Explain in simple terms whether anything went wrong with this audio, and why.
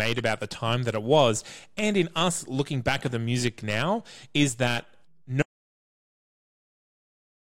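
Something did go wrong near the end. At about 5.42 s, right after the speaker says "music now is that", the audio stops dead. What follows is an audio dropout to silence. It lasts about 2 seconds and runs to the very end of the clip. The gap is complete silence, with no faint background hiss or room sound at all. That suggests the recording kept running but received nothing. The likely cause is a lost input, such as a disconnected device, a failed link or an accidental mute. Whatever was said after that point is gone.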